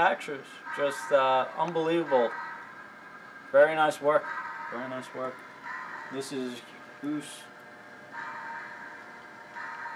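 No technical faults can be heard anywhere in the recording. Nothing interrupts, distorts or degrades the sound at any point.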